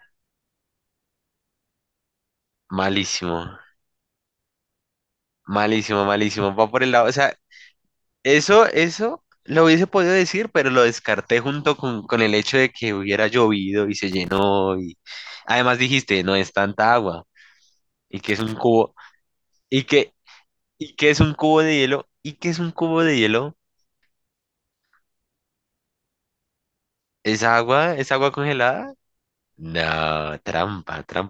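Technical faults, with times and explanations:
14.11 to 14.43 s and 18.28 to 18.52 s, loose connector crackle: two irregular bursts of scratchy crackle break into the speech, the first lasting about 0.31 s and the second about 0.24 s. A worn or dirty contact somewhere in the cable path is making and breaking as it shifts, so the signal is rapidly chopped on and off. Any DC on the line turns each break into a pop.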